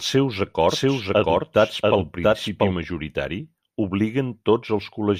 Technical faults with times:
0.69-2.73 doubled audio track

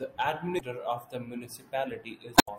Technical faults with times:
0.56-0.60 damaged data in a compressed stream
2.34-2.48 damaged data in a compressed stream

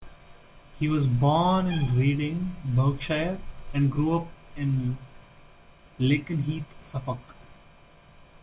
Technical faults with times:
none

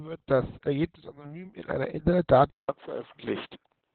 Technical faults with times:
0.00-3.95 Opus voice compression
2.50-3.95 input switched to a poorer device

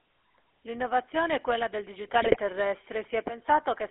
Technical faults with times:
0.00-3.91 GSM full-rate codec
2.22-2.37 GSM bit errors

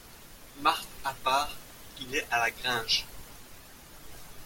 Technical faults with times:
none

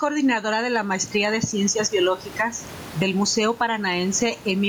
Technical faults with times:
0.00-4.68 gain pumping

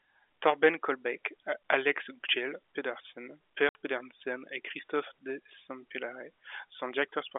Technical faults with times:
3.69-3.75 packet loss filled with silence

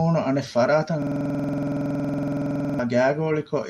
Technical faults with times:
1.02-2.79 system hang loop

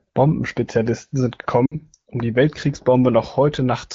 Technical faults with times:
1.65-1.75 lost AMR speech frames

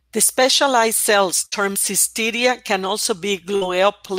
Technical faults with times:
1.45-1.55 burst of packet loss
3.56-3.64 burst of packet loss

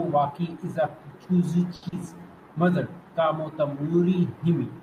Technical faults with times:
1.75-1.85 short stall from a late packet
1.88-1.95 short concealed packet loss

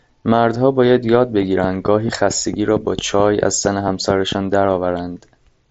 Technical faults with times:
1.42-4.33 train of clicks

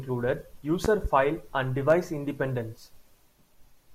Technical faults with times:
0.85-1.08 loud pop
1.90-1.94 loud pop

